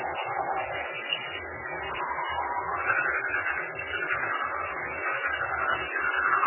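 From start to finish the audio carries heavy MP3 compression damage, likely from an encoder starved of bits, consistent with a rate as low as 8 kbps. Nothing survives above 3 kHz, so the treble is gone and the sound is dull and boxed-in, while weak components flicker in and out between frames, giving a watery, swirling texture and smeared attacks. A spectrogram would show a hard ceiling at 3 kHz and patchy, blocky energy below it; the waveform would show softened transients.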